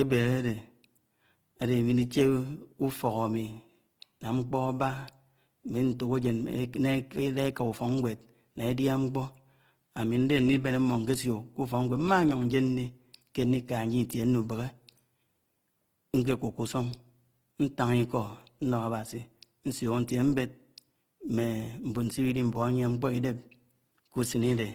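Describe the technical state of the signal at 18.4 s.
At 18.4 s the speech carries the same plainly audible coding damage that runs through the whole clip: a rough, grainy texture on voiced sounds, with the band reaching up to about 20.2 kHz. This is likely Opus compression in its music (CELT) mode, which fits a rate near 16 kbps. Short of bits, it refills the bands by folding lower ones or with noise. Few spectral holes remain, so it is grainy instead of swirly, which sets it apart from MP3.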